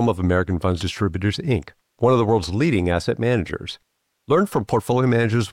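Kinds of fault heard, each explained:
No technical faults can be heard in the speech; the signal holds steady, with no interruptions, distortion or sudden changes in level or tone.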